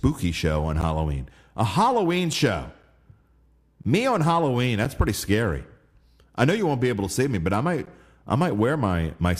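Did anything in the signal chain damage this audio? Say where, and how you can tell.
Yes, there is a gap between stream segments at the playback stage. Short hard-edged silences sit at 0.81 s after "show on", 3.84 s, 4.85 s before "pretty scary", and 7.86 s after "me but I might". Each lasts 8 to 14 ms. They fall whole seconds apart, which fits 1-second segments whose timestamps don't quite meet. The player pads each seam with silence. No audio is lost.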